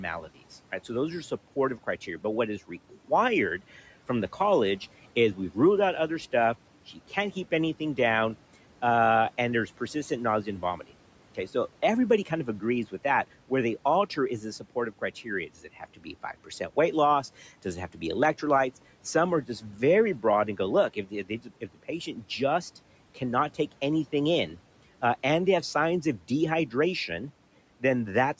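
Parts of this speech recording sound swallowed, with word endings and soft consonants briefly sinking toward the background at 2.68–3.61 s, 9.94–11.55 s, 14.16–16.51 s, 17.39–18.02 s and 19.48–21.84 s. This is speech cut by the noise suppressor. It mistook quiet speech for the room noise, which sits about 24 dB below the voice, and pulled it down by about 11, 11, 12, 8 and 12 dB. Each stretch loses only a tenth to a third of a second of actual sound. The call microphone's processing tops out at 8 kHz.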